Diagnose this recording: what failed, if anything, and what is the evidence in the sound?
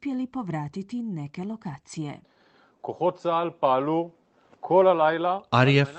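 Nothing failed in this speech recording; it came through a working call path, and its top end stopping around 8 kHz is what that call codec's setting would give.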